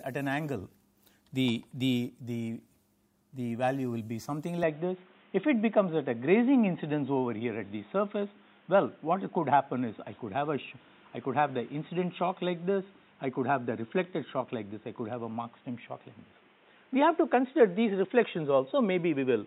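From 4.63 s to the end, the audio turns narrow and boxy with nothing above 3.8 kHz, a level step of around 5 dB and a new noise floor roughly 35 dB down, with no gap at the change. This points to an input switched to a poorer device as the likely cause. A spectrogram shows the top band cut off abruptly at 4.63 s, and the waveform shows the step in level.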